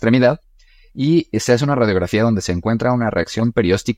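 No technical fault can be heard anywhere in the speech recording.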